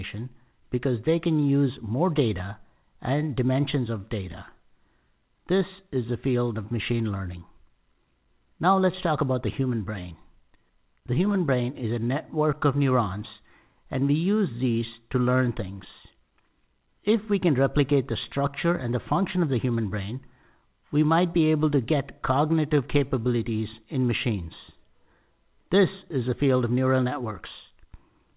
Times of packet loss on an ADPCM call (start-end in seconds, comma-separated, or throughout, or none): none